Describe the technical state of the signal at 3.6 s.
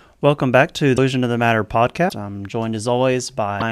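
Right around there, from 3.59 to 3.62 s, the speech jumps ahead and breaks into a brief chirp, noise burst or dropout, likely a broken MP3 bit reservoir. Frames went missing, so the next one borrowed the wrong bytes. That span fits roughly one 26 ms frame.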